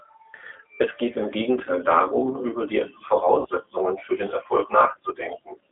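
G.729 codec coding runs throughout. The speech is rebuilt at 8 kbit/s from a vocal tract filter, a pitch predictor and sparse pulses, held within 300 Hz to 3.4 kHz, and sounds plainly rough and synthetic. VoIP packet loss concealed by the speech codec follows at 1.64–1.69 s after "geht im", at 3.39–3.46 s after "darum über die" and before "für den", and at 4.92–4.96 s. Each time the decoder extends its last pitch and filter, turning 20, 60 and 20 ms of missing audio into a brief, fading stretch of sound. The longest gap fits three lost packets.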